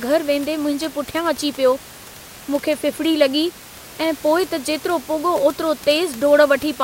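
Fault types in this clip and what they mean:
No faults on this speech clip; the only thing under it is the room's own background noise, sitting about 20 dB below the voice, which belongs to the recording rather than the system.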